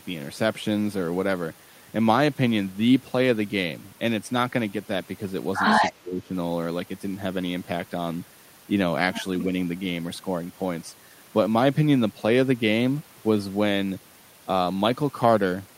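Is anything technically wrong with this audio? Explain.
Yes. From 5.82 to 5.92 s there is an echo leak. A faint delayed copy of the speech returns about 234 ms later, roughly 15 dB below the talker. Likely cause: a loudspeaker on the far side whose echo canceller let some of its microphone pickup through.

Right after, from 5.91 to 6.32 s, the speech is suppressed in double talk. The level dips sharply, by around 20 dB at its deepest, for about 0.4 s. Both sides were likely talking, so the canceller turned down the real talker along with the echo.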